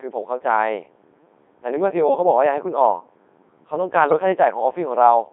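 Throughout, the speech passes through a Codec 2 vocoder, which fits its 3.2 kbit/s mode. It is resynthesised from sine waves within a 250 Hz to 3.6 kHz band, leaving it heavily robotic and buzzy. From 4.07 to 4.19 s, bit errors on digital voice radio corrupt roughly one bit in twenty, across what sounds like about four frames, so the voice jumps in pitch and level and warbles into gibberish.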